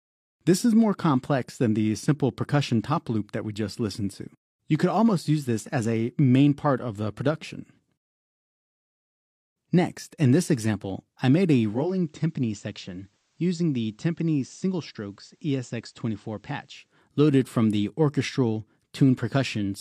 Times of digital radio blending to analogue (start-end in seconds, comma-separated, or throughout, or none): 11.63-17.07